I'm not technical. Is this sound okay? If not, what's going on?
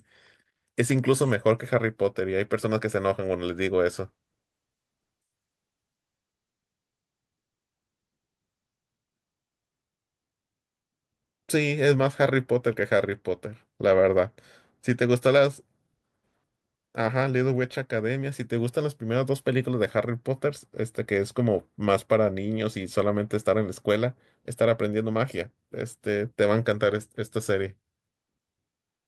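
No. Call bitrate drop, 4.06 to 10.09 s: the connection seemed to slow, so the speech was packed into far less data, turning rough and muffled.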